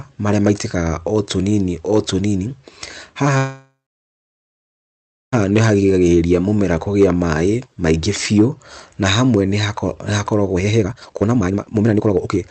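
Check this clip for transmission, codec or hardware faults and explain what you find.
The clip has three kinds of fault: one call audio freeze, two jitter buffer speed-ups and one jitter buffer slow-down. The call path's band limit can be heard throughout, with the spectrum ending near 8 kHz, consistent with Opus at around 32 kbps.

Call audio freeze, 3.37 to 5.34 s. The speech stops and the last sound is carried on as a fading buzz, which then sinks into about 1.6 s of silence. The likely cause is delayed packets draining the jitter buffer. When the stream resumes, it picks up where it stopped, so nothing is lost but about 1.95 s of extra delay has been added. On a spectrogram this looks like a smeared, flat-textured band that fades into a blank gap. The waveform shows a decaying tail followed by a flat line.

Jitter buffer speed-up, 5.44 to 5.82 s and 10.53 to 12.50 s. To shed a backlog of buffered audio, the receiver cuts out short pitch-period chunks over and over. 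Pitch stays the same but the pace rises. The first stretch runs at 113%, removing roughly 50 ms. The last two seconds run at 188%, removing around 2 s, and sound clearly rushed. Harmonics keep their spacing on a spectrogram, but syllables are compressed in time, and the waveform shows tightly packed bursts.

Jitter buffer slow-down, 5.87 to 6.11 s, just before "mũmera kũgĩa". Here the buffer is running low or has just raised its target delay, and it builds a reserve by repeating single pitch periods, adding 55 ms and playing at 80% speed. The sound is drawn out at unchanged pitch. A spectrogram shows stretched, evenly repeated striations, and the waveform has near-identical cycles placed one after another.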